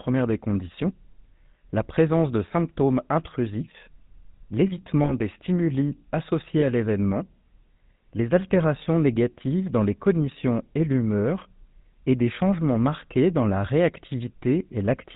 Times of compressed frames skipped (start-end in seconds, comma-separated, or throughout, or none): none